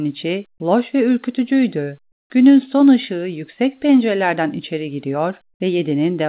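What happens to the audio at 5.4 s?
Nothing goes wrong at 5.4 s: the speech continues intact through the call path, whose narrowband G.711 coding leaves nothing above 4 kHz.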